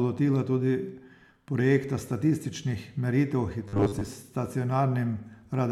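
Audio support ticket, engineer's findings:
Robotic sound from repeated short buffers, 3.68–4.07 s: rigid 100 Hz buzz over speech. Likely 10 ms buffer looped, about half the audio skipped. Fixed pitch distinguishes it from codec warble.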